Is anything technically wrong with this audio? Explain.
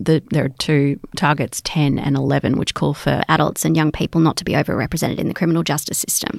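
Yes. From 3.21 s, right after "which call for", to the end, the speech turns higher and hurried, about 1.47 semitones up and 1.09 times faster. This is a wrong sample rate, which fits 44.1 kHz audio played at 48 kHz without conversion.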